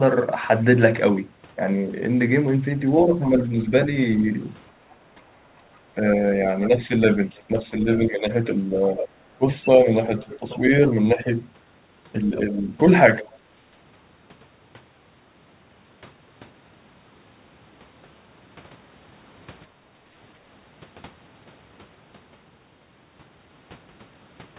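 From 4.81 to 5.15 s the room background is gated by the echo canceller: the ambient floor sinks by about 9 dB for roughly a third of a second, then comes back. It happens again from 19.68 to 20.13 s, about 10 dB deep and lasting around half a second. The dips fall on the background. That sets them apart from the double-talk losses below. The canceller clamped the microphone while its loudspeaker played and released it afterwards.

Between 5.75 and 13.32 s the other side's voice leaks through in three stretches. The first, 5.75 to 7.43 s, is faint, far below the talker. The second, 8.95 to 10.57 s, is much stronger, only about 10 dB down. The third, 12.36 to 13.32 s, is about 20 dB down. The leakage is likely residual loudspeaker echo that the canceller failed to subtract from the microphone. It is an added voice, whereas gating removes sound.

Overlapping this, from 5.95 to 12.75 s, the talker's own speech is suppressed in double talk. 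Its level drops in pieces by about 10 dB, for roughly a second and a half in total, while the far side is also speaking. The likely cause is the canceller failing to separate the local talker from the echo and pulling both down. What distinguishes this from gating is that the near voice itself weakens, not just the background. Throughout, the audio has no content above 4 kHz, which fits a 64 kbps G.711 mu-law call path.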